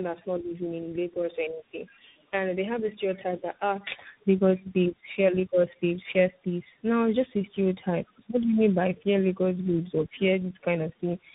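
Tandem speech coding runs through the whole clip: the speech passes through three speech codecs in a row, each re-encoding the previous one's already damaged output. Nothing remains above 3.8 kHz, and the voice sounds rough, muffled and warbly, with a grainy edge that points to CVSD last in the chain.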